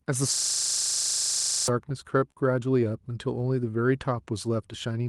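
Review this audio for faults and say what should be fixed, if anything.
From 0.36 to 1.68 s there's a system hang loop: the same 40 ms slice of speech repeats 33 times at 25 Hz, giving a hard rattling buzz while the driver is frozen and the hardware keeps replaying its ring buffer. About a second and a half of real audio is lost. Keep the audio thread from blocking and have a watchdog mute output on a stall.

Right after, from 1.89 to 2.38 s, the repeated stalls (stutter) begin: five short gaps, the longest 45 ms, where the jitter buffer ran dry and the receiver stretched the last sound. That adds 85 ms, about 18% of the span, so nothing's missing, but it drags. A deeper adaptive jitter buffer should smooth it out.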